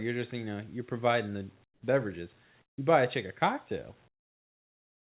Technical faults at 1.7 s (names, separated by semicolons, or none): comfort noise in place of the background